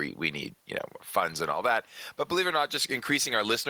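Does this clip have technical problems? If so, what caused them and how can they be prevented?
No, nothing in this speech recording stood out as a technical problem on listening, so there is no cause to trace and nothing to prevent.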